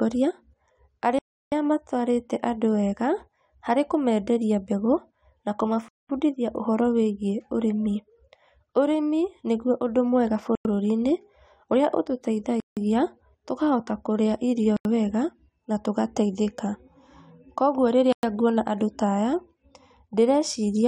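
The speech drops to silence six times and resumes where it left off: at 1.19 s for 333 ms, 5.88 s for 210 ms, 10.55 s for 98 ms, 12.60 s for 167 ms, 14.77 s for 85 ms and 18.13 s for 107 ms. The pattern is most likely a Bluetooth stall. Interference delays packets, the headphone buffer empties, and playback halts until the retransmitted audio arrives.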